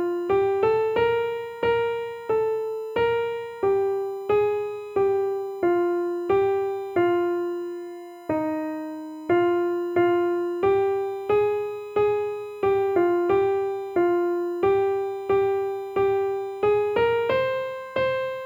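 A steady USB whine runs throughout at a fixed 1 kHz, the 1 ms USB frame rate coupling in via power or ground. It sits roughly 30 dB below the signal, and its 1 kHz pitch separates it from mains hum.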